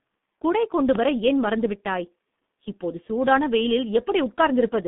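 From the start the speech carries heavy G.723.1 codec damage. The band runs only from 150 Hz to 3.6 kHz, and a coarse, hoarse, slowly updating voice model, consistent with a roughly 6 kbit/s stream, blurs the consonants. Unlike simple band-limiting, this adds rasp, not just muffling.

At 0.95–0.98 s a single loud pop, roughly 10 dB above the speech, cuts through. It is one sharp transient with the speech continuing underneath, not a dropout or a repeated click, which points to a likely electrical voltage step.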